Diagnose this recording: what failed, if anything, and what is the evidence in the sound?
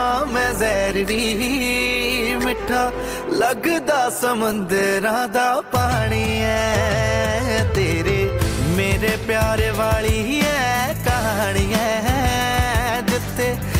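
Streaming stage: adaptive stream starting at a low bitrate. Until 6.0 s the treble is dull and artefacts stronger, fitting 16 kbit/s Opus; quality steps up gaplessly.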